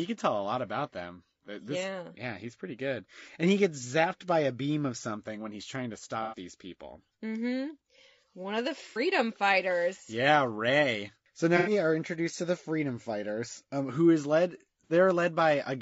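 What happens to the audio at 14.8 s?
Right after "um who is led", from 14.84 to 14.93 s, there is AAC frame loss with concealment. The decoder was missing audio, which fits two lost frames. It rebuilt the gap from the last good spectrum, so the moment sounds like a brief smeared, noisy patch. Underneath, the sound is rough and grainy, likely from low-delay AAC compression at a low rate near 32 kbps.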